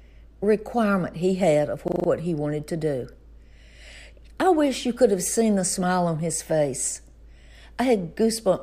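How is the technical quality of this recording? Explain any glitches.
One glitch stands out: a system hang loop from 1.88 to 2.08 s, between "requirement he had of" and "he wanted to do". For 0.2 s the computer or audio driver stalled while the sound hardware kept replaying the same 40 ms block of its ring buffer, five times over. That repetition at 25 Hz gives a brief rattling buzz, which fits a buffer of about 40 ms. Nothing of the speech seems to be lost. Unlike an underrun dropout, which cuts to silence or crackle, this fault repeats identical audio exactly.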